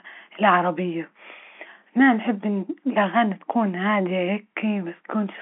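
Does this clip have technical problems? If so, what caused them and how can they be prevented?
No, the speech arrives through ordinary G.711 mu-law telephone coding at 64 kbps, with the narrow line band of roughly 250 Hz to 3.5 kHz that such a connection normally carries, and nothing in the signal departs from that.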